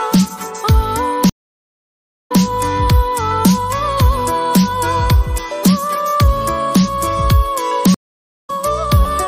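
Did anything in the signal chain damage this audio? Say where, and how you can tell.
Yes. The sound drops out for 980 ms at 1.29 s and resumes 131 ms earlier, repeating material. At 7.94 s a 516 ms gap resumes with almost nothing lost. That is a stream reconnect: the network connection broke and the player restarted its decoder mid-stream.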